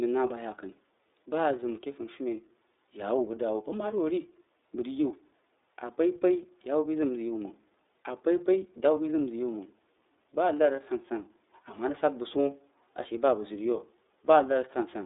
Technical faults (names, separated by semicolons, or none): iLBC codec